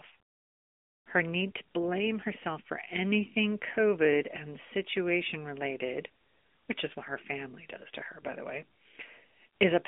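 The clip is speech carried through an AMR narrowband mobile codec for its whole length. The band is confined to roughly 200 Hz to 3.5 kHz, with nothing above 3.7 kHz, which reflects the 8 kHz sampling of a narrowband phone path. The pulse-driven vocal-tract model leaves plainly audible coding damage, a thin, buzzy, synthetic edge on the voice that points to a mid-rate mode near 10 kbps.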